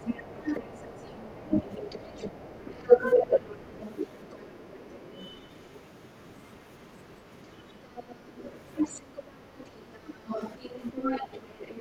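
From the start to 5.66 s, and again from 7.59 s to the end, the other side's voice leaks through underneath, about 20 dB down at first and then louder at about 15 dB down. That's likely loudspeaker echo the canceller didn't fully remove. Over those same stretches the speech gets suppressed in double talk, dipping by up to about 25 dB at 0.13–1.72, 2.98–3.42, 4.84–4.9, 9.31–10.33 and 11.47–11.79 s. That's likely the canceller turning both voices down together.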